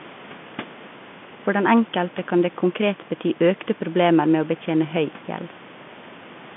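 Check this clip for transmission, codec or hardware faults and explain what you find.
Nothing faulty can be heard anywhere in this recording.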